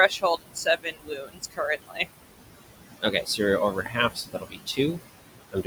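Across the whole clip the background pumps: it sinks by about 19 dB in the gaps between phrases, then swells back under the speech. These are noise suppressor artifacts. The suppressor judges each frequency band frame by frame, and bands it classes as steady noise are pushed down hard. The room noise sits about 10 dB below the speech.

The same process also eats into the speech itself, in five places. From 0.09 to 1.6 s, around a second of the opening sounds faint and swallowed. It happens again briefly between 1.77 and 2.07 s, for a fraction of a second between 3.0 and 3.4 s, for roughly half a second scattered between 3.73 and 4.97 s, and in the final stretch from 5.51 to 5.66 s. The drops reach about 18 to 21 dB. This is speech cut by the noise suppressor: quiet consonants and soft word endings look too much like the steady room noise, so they are turned down together with it.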